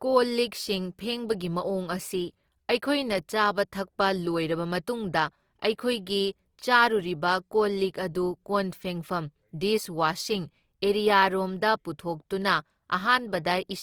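Throughout the speech, the sound is grainy and rough, with plainly audible codec damage. Vowels turn noisy instead of swirly. This is likely Opus compression in music mode, which fills starved bands with folded or noise energy. That fits roughly 24 kbps. Content still reaches 20.3 kHz.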